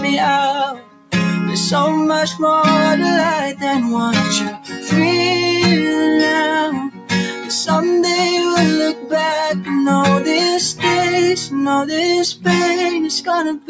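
A speech-style noise suppressor left running on non-speech material makes the level pump by a few decibels, and the waveform envelope visibly breathes as sustained parts sag between attacks. The sound cut by the noise suppressor drops sharply at 0.73–1.12 s (about 12 dB), 4.54–4.78 s (about 9 dB), 6.9–7.11 s (about 12 dB), 7.34–7.5 s (about 6 dB) and 8.94–9.12 s (about 8 dB), showing as darker patches on the spectrogram. The spectrogram is also empty above 8 kHz, which fits the call microphone path's bandwidth.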